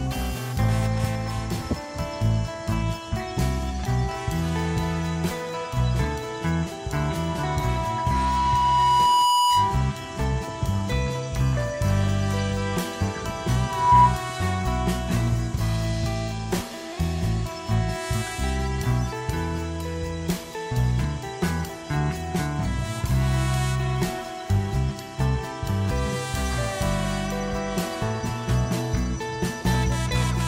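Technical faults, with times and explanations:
7.0–9.93 s and 13.61–14.17 s, loudspeaker feedback squeal: a single 978 Hz tone swells from nothing, over about two seconds and then within a fraction of a second, to sit roughly 5 and 10 dB above the sound. A microphone is picking up its own loudspeaker, and at that frequency the loop gain exceeds one. What sets it apart from a steady hum or tone is that it grows by itself.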